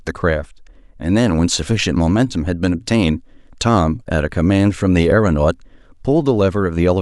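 Nothing in the recording stood out as a technical fault on listening.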